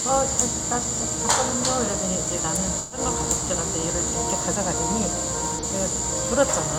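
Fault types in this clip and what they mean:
Corrupt frame concealed: the decoder detected damaged AAC frames and papered over them near 2.79 s and 5.56 s.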